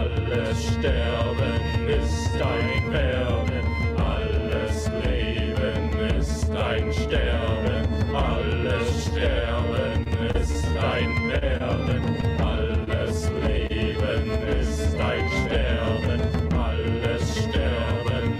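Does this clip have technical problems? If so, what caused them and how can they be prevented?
Yes. From 10.03 to 10.77 s the sound turns choppy and robotic. This is repeated packet loss: four short gaps, the longest 24 ms, each patched by extending the previous sound. Prevention: a steadier network path with less congestion and loss, or forward error correction.

At 11.39–11.43 s and 13.67–13.72 s a sound hangs slightly too long. These are short stalls from a late packet: the jitter buffer ran dry, so the receiver held the last sound for about 30 ms until the packet arrived, without losing any audio. Prevention: a slightly deeper or adaptive jitter buffer would absorb that delay.

At 11.57–11.62 s and 12.84–12.89 s there is a brief smear. These are short concealed packet losses: about 20 ms went missing and was filled by continuing the preceding sound. Prevention: reduce packet loss on the link, or add redundancy so lost packets can be rebuilt.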